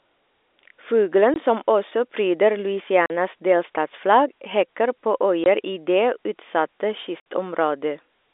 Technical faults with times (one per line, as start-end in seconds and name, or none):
1.34-1.36 packet loss filled with silence
3.06-3.10 packet loss filled with silence
5.44 packet loss filled with silence
7.20-7.24 packet loss filled with silence